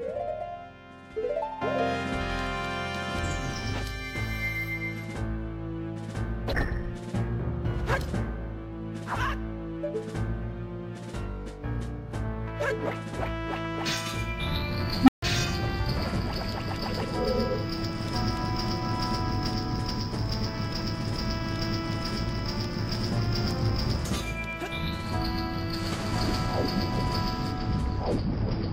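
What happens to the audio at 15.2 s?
An unstable filter fault runs from 15.01 to 15.23 s. A recursive filter with bad coefficients drives its output upward without bound: a tone of roughly 300 Hz swells over 66 ms, clips and overflows, and the audio then drops out for 145 ms until the filter resets.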